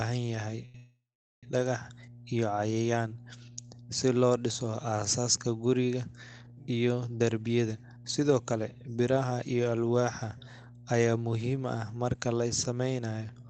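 Mains hum runs through the whole clip, a steady 60 Hz tone about 20 dB below the speech, coupled in from the power line by a ground loop or nearby transformer. A short stall from a late packet follows at 0.65 to 0.76 s: the jitter buffer ran dry, so the receiver held the last sound for about 89 ms until the packet arrived, then resumed with nothing lost. A call audio freeze runs straight on from 0.76 to 1.45 s. The held sound fades and then gives way to roughly 430 ms of silence before the speech resumes where it stopped, most likely because packets were held up in transit and the buffer emptied. Jitter buffer speed-up appears from 7.46 to 9.43 s, at about 111% speed, and again from 13.17 to 13.47 s, at about 112%. Both times the receiver trimmed short pitch-period pieces, about a fifth of a second in the first stretch and a few hundredths in the second, to cut the buffer's delay. The speech sounds hurried but keeps its pitch. 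The call codec's band limit of about 8 kHz can be heard throughout.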